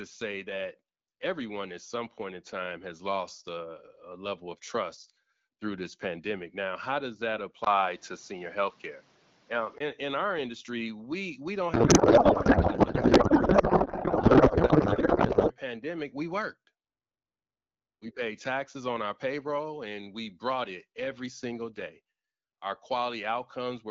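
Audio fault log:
7.64 to 9.80 s, input switched to a poorer device: a 20 ms gap, then duller sound cut off near 7.6 kHz. Level shifts about 5 dB, new noise about 35 dB down, likely a device change.
11.73 to 15.53 s, codec payload misread: speech gives way to garbled warble. Octet-aligned AMR frames are read as bandwidth-efficient, so fields are decoded from the wrong bits.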